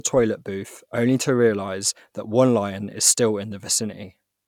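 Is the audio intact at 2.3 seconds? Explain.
Yes, the speech at 2.3 seconds is intact, with no dropout, click, distortion or other fault at that moment.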